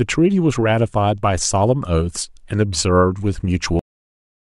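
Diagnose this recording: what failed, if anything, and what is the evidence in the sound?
The failure is a cut-off end at the storage or buffer stage. The speech stops abruptly at 3.79 s, mid-sound, with no natural decay. Digital silence fills the final 0.69 s. The last buffers were never written, so the recording simply ends there.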